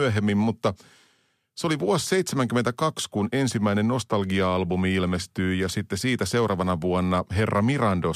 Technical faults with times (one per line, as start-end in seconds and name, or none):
none